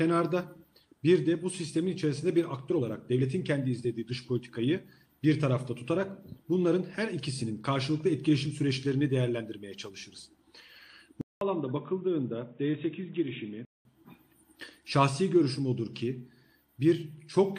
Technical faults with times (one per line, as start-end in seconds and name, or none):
11.21-13.85 input switched to a poorer device